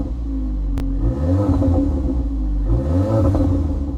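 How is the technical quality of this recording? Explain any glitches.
The recording has one brief glitch.

Chunks out of order, from 0.78 to 0.81 s: a block of audio about 10.67 ms long arrived late and was played two chunks after its proper place, so the sound in that stretch runs in the wrong sequence. Nothing is missing, but the reshuffle creates three hard joins where mismatched waveforms meet, heard as a quick jumbled moment.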